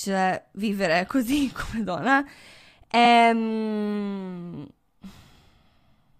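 Speech with a repeated-frames fault: from 3.04 to 3.11 s a 69.7 ms stretch plays once more, consistent with three compressed frames being resent, causing a brief stutter and adding 69.7 ms. A spectrogram or waveform shows that block duplicated back to back.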